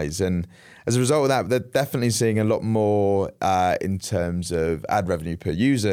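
Nothing in this speech recording points to a technical problem with the signal.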